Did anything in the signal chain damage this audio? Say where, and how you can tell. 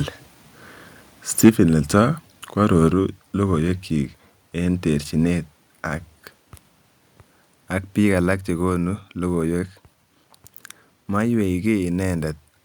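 Yes. From 1.44 to 1.49 s the loudest syllable turns harsh and crackly, its peaks flattened rather than rounded, with roughly a sixth of the samples in that stretch pinned at the converter's limit. This is microphone overload at the converter stage. The input gain was set high enough that the signal tried to go about 4 dB past the converter's ceiling, so the tops of the waveform were likely sliced off, adding that gritty edge.

The level then falls abruptly three times: at 1.49 s by about 4 dB, at 2.88 s by about 4 dB again, and at 8.34 s by about 2 dB. The speech and the background room sound drop together, in a single step each time, with no fade. That pattern is the microphone volume stepped down by call processing. The first drop lands right after the clipped peak, which points to the software likely reacting to the overload by cutting the device's input gain in stages.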